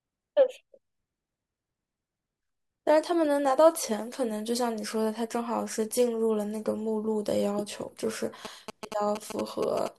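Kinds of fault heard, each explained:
GSM signalling bursts: from 8.45 to 9.88 s, a galloping dit-dit-dit of short 217 Hz buzzes sits roughly 10 dB under the speech, because a nearby 2G phone signalling the network emits radio bursts that the audio circuitry rectifies into audible sound.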